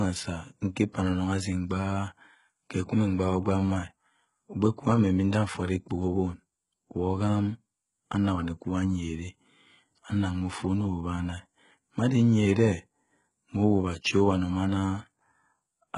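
HE-AAC compression, likely, runs throughout this speech: nothing above 11 kHz, and the replicated treble makes sibilants gritty and metallic, with heavy damage that fits roughly 12 kbps.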